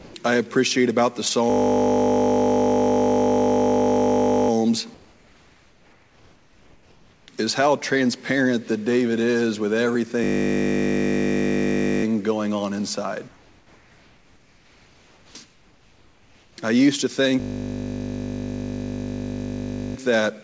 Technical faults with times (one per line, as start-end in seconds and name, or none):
0.00-0.14 sound dropped by the voice detector
1.50-4.50 system hang loop
4.94-7.28 comfort noise in place of the background
10.24-12.04 system hang loop
13.28-16.58 comfort noise in place of the background
15.31-15.35 onset clipped by the voice detector
17.40-19.96 system hang loop